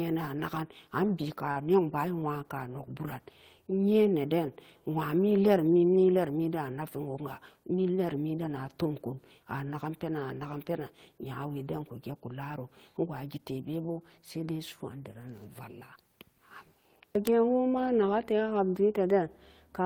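A short stall from a late packet at 1.51 to 1.59 s: the jitter buffer ran dry, so the speech is held about 42 ms, then resumes with nothing lost.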